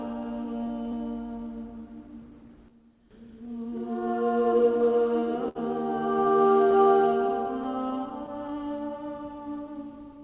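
The audio comes through a G.711 mu-law call path, so it is band-limited with nothing above 4 kHz. Clock drift between sender and receiver runs through the whole clip. The sender's clock runs roughly 5 percent slow, so the receiver's buffer keeps running short. Repeated timing corrections follow from 0.45 to 10.22 s. The receiver stretches the audio to 98 percent speed, adding roughly 200 ms. Scattered short gaps appear from 2.08 to 5.57 s. About ten small holes are patched by continuing the last sound, the longest around 70 ms. A second run of scattered short gaps spans 7.64 to 10.11 s. There are again about ten, but shorter, none much over 15 ms.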